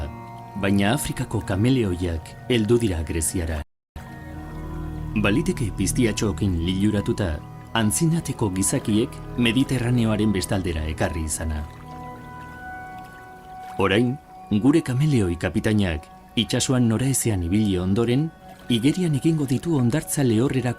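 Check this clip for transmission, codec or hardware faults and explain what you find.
One fault: a rebuffering stall. At 3.62 s the sound drops into silence and picks up again at 3.96 s exactly where it broke off, adding about 0.34 s. The player ran out of downloaded audio and paused until more data arrived, so nothing is skipped, only delayed.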